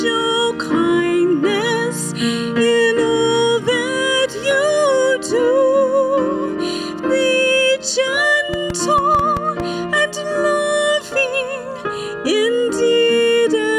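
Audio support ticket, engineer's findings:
Irregular ticking, roughly seven sharp pops, 8.54–9.61 s, about 5.7 per second, about 10 dB above the sound. Train of clicks. Likely cause: external interference or a faulty connection or power supply injecting near-identical pulses at an uneven pace.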